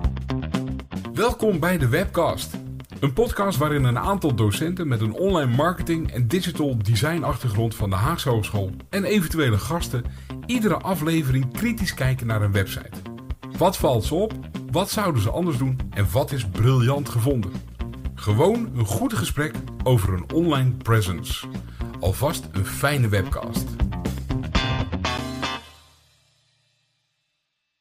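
At 5.76 s and again at 25.18 s there's a block of digital silence: the audio drops straight to silence for about 6.4 ms, then 10 ms, and snaps back with no fade. At these lengths each one lands as a tick or dip rather than an audible hole.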